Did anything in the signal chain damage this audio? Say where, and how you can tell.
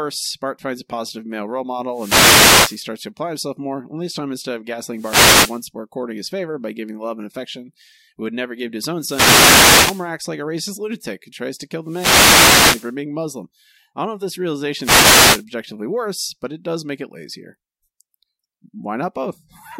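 Yes, the damage happens on the wireless link, before the signal ever reaches the converter. There are five wireless microphone noise hits: 1.92–2.84 s, 4.92–5.64 s (right after "this time instead of"), 8.98–10.11 s (after "never give to his"), 11.84–12.96 s and 14.79–15.45 s (after "don't know if this"). Each one is a swish of static lasting between 0.65 and 1.13 s over the speech. That's the FM radio carrier fading as reflections cancel it, so receiver noise rises over the voice until the signal recovers.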